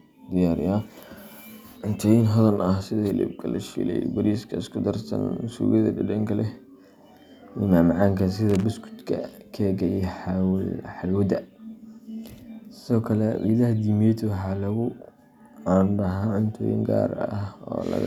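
Loose connector crackle breaks into the speech from 8.50 to 8.64 s, a burst lasting roughly 150 ms. A worn or dirty contact somewhere in the signal chain is shifting, so the circuit rapidly opens and closes, chopping the audio into fragments while any DC present on the line jumps with each break and adds pops. The result is a brief, irregular scratching crackle laid over the speech.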